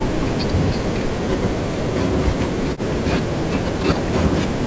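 A speech recording in which the talker repeatedly sinks, thins out and drops away in pieces, from 0.1 to 1.07 s, 1.36 to 3.59 s and 3.75 to 4.61 s, with the deepest dips around 40 dB down. This is likely speech suppressed in double talk: an echo canceller, unable to tell this talker from loudspeaker echo while the far side spoke, turned both down. The call microphone processing is audible in the band stopping at 8 kHz.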